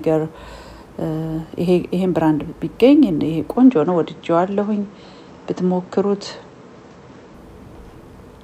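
At 3.57 s the audio suddenly goes dull and boxy, with nothing above 8 kHz, and it opens back up at 7.34 s. There's no gap at either switch and the level barely moves, but a faint new noise floor sits well under the signal during that stretch. That pattern points to an input switched to a poorer device, likely a different mic or a headset's call profile taking over mid-recording.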